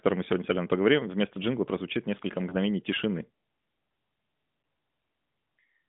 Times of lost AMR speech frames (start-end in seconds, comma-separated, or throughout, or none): 2.50-2.56, 4.62-4.64